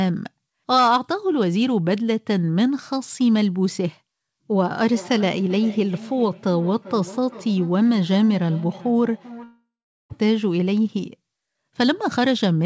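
Feedback echo between two devices, 4.88 to 10.24 s: a second device replays this speech into a nearby microphone, so it returns thinner and ringing roughly every 0.4 s, peaking about 18 dB below the speech. A long network dropout follows from 9.44 to 10.13 s, likely from lost packets: the last sound smears into a fading buzz, then about 0.42 s of silence, and roughly 0.66 s of speech never returns. Throughout, the G.722 call path leaves nothing above 8 kHz.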